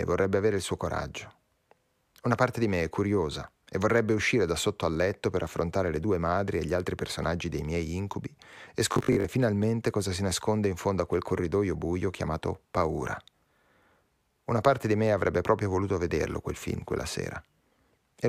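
From 8.93 to 9.25 s, just after "dei miei incubi e" and before "finalmente cosa si nasconde", the speech turns into a rigid, metallic buzz. It still follows the words loosely. This is robotic sound from repeated short buffers. The likely cause is audio arriving too seldom, so the last short chunk was replayed to fill the gaps. About half the sound is repeats. The buzz sits at 50 Hz, which fits a 20 ms chunk.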